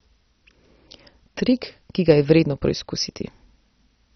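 Throughout, the speech sounds dull, gurgling and granular, likely MP2 compression starved of bits; the spectrogram stops at 6.2 kHz, with flickering band blocks below.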